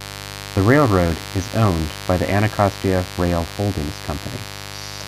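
Sharp switching spikes from a dimmer, rectifier or unshielded line are getting into the chain at 50 Hz mains, twice per cycle, producing mains buzz throughout. Harmonics stretching into the kilohertz range give a steady, raspy buzz sitting roughly 15 dB under the speech.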